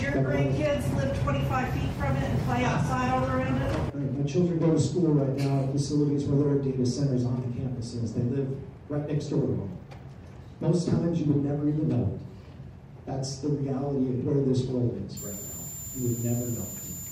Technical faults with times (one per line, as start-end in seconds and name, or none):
15.17-17.11 switching supply whistle